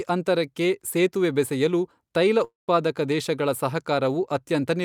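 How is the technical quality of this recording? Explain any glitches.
There's one clear glitch in the speech. From about 2.44 to 2.69 s you hear a long network dropout: the last sound smears into a fading buzz, goes silent for roughly 150 ms, then picks up again with about 240 ms gone. That's likely the receiver filling a gap where nothing arrived.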